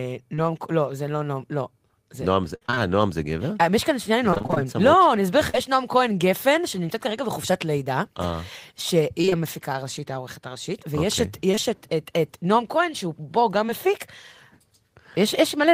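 Right at 0.35 to 0.39 s there's a short concealed packet loss: about 20 ms of the call never reached the decoder, so the receiver carried the last bit of sound forward and blended back in. You hear it as a tiny smear in the speech.

From 2.55 to 2.80 s it turns into repeated packet loss with robotic sound. There are five holes, roughly 140 ms missing in total, the longest 56 ms. Over half that stretch is patched, so it goes choppy. It happens again from 4.31 to 5.55 s, with eight gaps of up to 38 ms. That's about 180 ms missing, but spread thinly, so it's intermittent roughness rather than constant buzz. At 9.21 to 9.33 s there are three gaps of up to 21 ms, about half the span filled in, giving a quick robotic flutter.

Back to single drops after that. Two 20 ms losses sit back to back at 11.51 to 11.59 s, enough to smudge whatever sound falls there. One more comes at 13.67 to 13.70 s. 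Each is a brief continuation of the previous sound before the real audio returns, heard as a small wobble.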